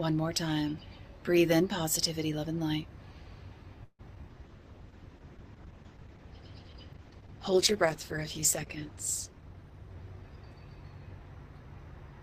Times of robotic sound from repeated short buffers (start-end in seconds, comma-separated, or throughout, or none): none